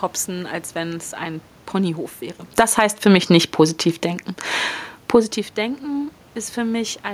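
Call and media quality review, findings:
Automatic gain falling, 2.44–2.82 s: speech and room noise drop together by about 10 dB. The AGC read the input as too loud or its background noise as too strong and pulled gain down fast.

Automatic gain rising, 2.72–3.45 s, just before "positiv denken": AGC raises gain back up about 8 dB, so voice and background swell together. Pumping from the gain loop.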